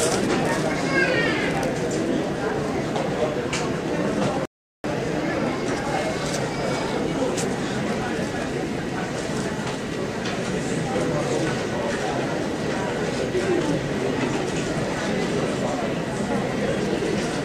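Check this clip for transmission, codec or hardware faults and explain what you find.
One fault turns up in this recording of sounds. A rebuffering stall runs from 4.45 s to 4.84 s: the player exhausted its store of downloaded audio and halted playback until more data arrived. The sound drops out to silence for about 0.39 s, then picks up exactly where it stopped, with nothing skipped. Because no audio is lost, the stall simply adds 388 ms to the running time.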